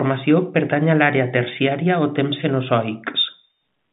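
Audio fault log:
No faults found; the speech sits in a telephone band of roughly 150 Hz to 3.7 kHz, consistent with ordinary G.711 A-law telephone coding.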